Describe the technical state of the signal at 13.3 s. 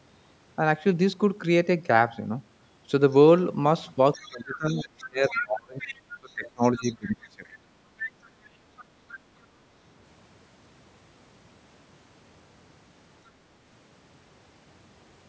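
At 13.3 s the clip is at the end of a brief stretch of the other side's voice leaking through, from 13.26 to 13.3 s. The likely cause is an echo canceller that failed to fully remove the far end's audio, played on the talker's loudspeaker, from the microphone pickup. The result is a faint scrap of a second voice lasting about 40 ms, sitting far below the talker's speech.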